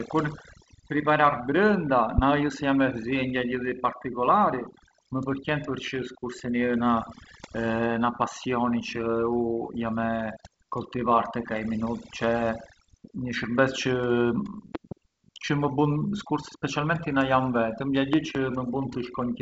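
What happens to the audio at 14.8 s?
A loud pop runs from 14.75 to 14.94 s: two sharp clicks, roughly 10 dB above the speech, likely from a voltage step or static discharge. They appear as two tall waveform spikes and thin full-height spectrogram lines. Beneath them, overdone noise removal persists, gating quiet bands into twinkling specks that show as isolated dots on a blank spectrogram background.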